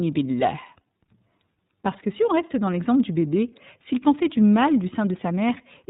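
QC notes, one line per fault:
Throughout, iLBC codec: the speech is squeezed into narrowband with nothing above 4 kHz, and it has a plainly audible rough, synthetic edge, since each frame's excitation is coded on its own. The graininess fits iLBC's 30 ms frame mode at 13.33 kbps.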